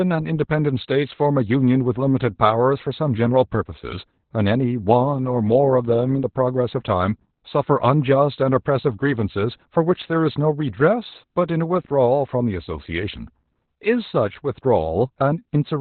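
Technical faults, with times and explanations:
Throughout: Opus voice compression. The speech has nothing above about 4.3 kHz, which fits narrowband SILK operation at a low bitrate near 8 kbps. Its linear-prediction coder renders the excitation coarsely, so the voice sounds muffled, hoarse and faintly robotic, with heavy codec damage.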